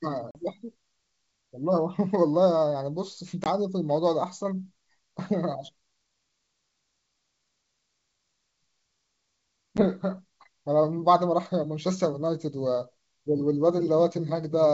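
Speech carried over a wideband G.722 link cuts out abruptly three times, at about 0.31, 3.44 and 9.77 s. The holes are hard-edged silences of roughly 40, 20 and 10 ms, the longest sounding like a few packets gone and the shortest like a single one. After each gap the sound resumes slightly distorted. This is packet loss on an ADPCM call: the decoder's predictor and step size drift from the sender's and need tens of milliseconds to resynchronise.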